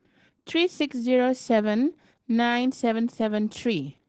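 Throughout this speech clip the audio carries plainly audible Opus voice compression: the sound is cut off above about 8 kHz and comes out muffled, hoarse and slightly robotic, which points to a wideband SILK mode at a low rate around 12 kbps. SILK's linear-prediction coder models the voice and codes its excitation coarsely, so the roughness sits in the voice itself rather than in the swirly, watery treble that a low-rate MP3 or AAC would produce.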